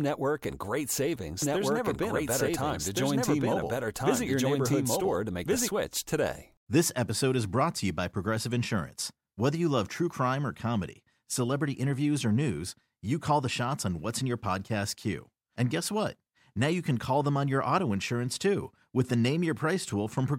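From 1.42 to 5.68 s, a doubled audio track: an equally loud copy trails about 1.5 s behind, likely from a second capture path, cutting in and out abruptly.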